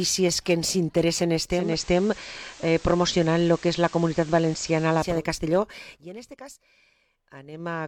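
At 1.50 s the receiver loses its digital signal and, in a digital radio blend to analogue, cross-fades over 362 ms to the FM broadcast until 5.26 s. Hiss rises to roughly 25 dB below the signal, and level shifts about 2 dB.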